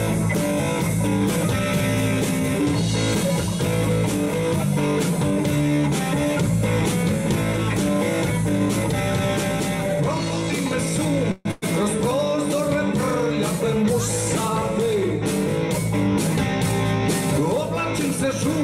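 At 11.31 to 11.47 s the sound stalls into a fading continuation of the last sound for about 140 ms and then carries on intact, a call audio freeze, likely from delayed packets emptying the jitter buffer; the spectrogram shows smeared, decaying bands. At 11.51 to 11.64 s a burst of packet loss leaves a roughly 110 ms concealed tail, visible as a shrinking waveform, and about 100 ms of audio is skipped.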